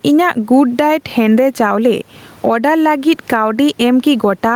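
Throughout the speech, the gain swings by around 15 dB. The result is gain pumping, likely from input gain set far too high with a fast limiter repeatedly clamping down, so loud and soft parts end up closer in level and the sound is squashed, while the low room noise sits normally about 40 dB below the speech.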